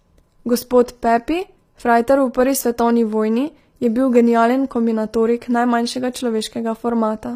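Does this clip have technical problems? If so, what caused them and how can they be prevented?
Yes. Throughout, the speech's upper band sounds bright but synthetic, with gritty, lispy s sounds and nothing above 15.5 kHz, likely HE-AAC compression at a low bitrate. Unlike plain low-pass dulling, the treble is present but rebuilt from copied lower bands. Encode at a higher bitrate or with plain AAC.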